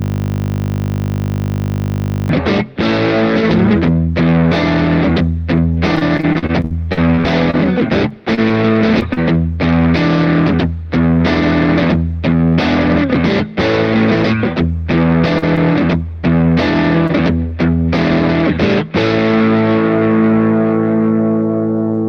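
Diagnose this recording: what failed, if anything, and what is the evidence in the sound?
A system hang loop at the driver or buffer stage, already under way at the start: one 20 ms block repeats about 114 times until 2.29 s, giving a steady 50 Hz buzz.

Repeated packet loss (robotic sound) on the network from 5.95 to 9.19 s: eighteen gaps, the longest 58 ms, each patched by extending the last sound, leaving choppy audio.

Short concealed packet loss, also network-side, at 15.38, 16.21 and 17.07 s: holes of 20 to 40 ms bridged by the decoder, heard as brief smears or wobbles.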